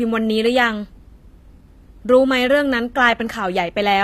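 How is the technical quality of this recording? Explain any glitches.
The recording has plainly audible codec damage across the whole clip. The treble sounds synthetic: s sounds and other hissy consonants come out gritty and metallic, and nothing at all reaches above about 14.9 kHz. The likely cause is HE-AAC compression at a low bitrate, consistent with roughly 24 kbps. That scheme codes only the lower spectrum and fills the top by copying lower bands upward under a coarse envelope, so the rebuilt highs stay bright but don't match the real speech harmonics.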